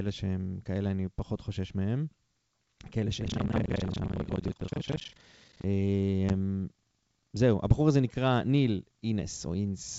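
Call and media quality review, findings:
Buffer tearing, 3.2–5.67 s: playback writer and hardware read pointer slipped and cross every period. Roughly 70% of each buffer replays audio around 150 ms old, hard joins both sides. Speech gets a robotic 25 Hz buzz/rattle, consistent with a 40 ms period.

Packet loss on the ADPCM (G.722) leg, 6.29–6.31 s: about 10 ms lost, likely a single packet, silence-filled. Decoder predictor and step size desync from the sender. Hard-edged gap, then speech resumes with brief distortion before settling.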